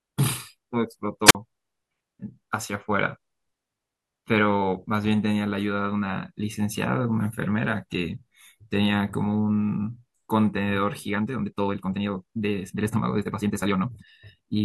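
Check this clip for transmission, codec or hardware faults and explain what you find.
Two faults stand out in this speech recording.

At 1.27 to 1.35 s there is a wireless microphone squelch dropout. The radio signal fades, and the receiver's squelch shuts the output off. A short burst of hiss comes first. Then the audio goes nearly silent for about 45 ms before the speech returns.

From 11.05 s to the end, at 14.64 s, there is a time-stretched section. The pace jumps abruptly to about 1.7 times normal speed, yet the pitch stays put. That is likely software squeezing the audio by dropping short pieces. The speech sounds rushed.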